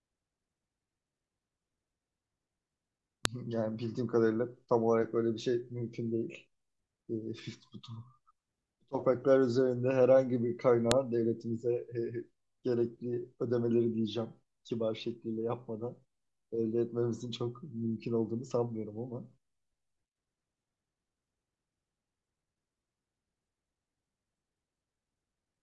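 Speech with two sharp, loud clicks, at 3.25 s and 10.91 s. Each is a file header played as audio. Separate WAV pieces were joined without stripping their headers. Those few dozen bytes play as samples, snapping in at each piece's start regardless of the speech.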